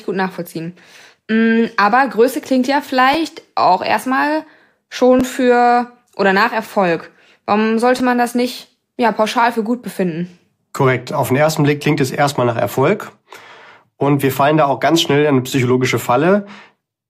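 At 3.14 s, between "klingt ja" and "auch erstmal", there's a repeated buffer: fresh audio didn't reach the device in time, so it replayed the last chunk once more. That chunk is only about 11 ms long, which fits a 512-sample buffer, so you hear a quick click with a hard join rather than a stutter. The same glitch returns at 5.20 s, just before "für oder nach", and at 7.99 s, just before "man das nicht ja", each costing roughly 10 ms of audio.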